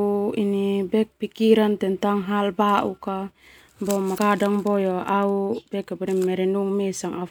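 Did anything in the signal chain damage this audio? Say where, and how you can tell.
Yes. Damaged data in the compressed stream corrupted a few frames, so the decoder misread them and had to search for the next valid frame header to regain sync. It is heard at 4.14 to 4.19 s as a brief garbled burst in the speech.

At 6.07 s the sound skips: a few tens of milliseconds vanish and the two sides are butted together with no gap. This is likely audio missing between chunks at the buffer stage, where a piece was dropped while one 2.5 s chunk closed and the next opened.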